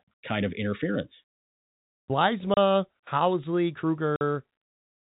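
At 2.54 s and 4.16 s, packet loss filled with silence leaves 30 and 50 ms gaps, fitting 10 ms packets. Their hard edges rule out smoothed concealment.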